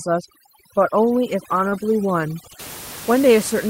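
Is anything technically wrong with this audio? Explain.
Yes, there are three faults. From 0.0 to 2.59 s, overdone noise removal pushes bands near the noise floor toward silence, leaving twinkling specks. Unlike plain room noise, which sits about 16 dB under the speech, this is a warbling, musical residue. From 1.69 to 1.73 s, short concealed packet loss extends the preceding sound to cover missing audio, giving a brief smear or wobble rather than a hard dropout. At 1.71 s, a lost packet rebuilt from error correction plays a low-bitrate copy, so the sound turns briefly rougher and noisier instead of smeared.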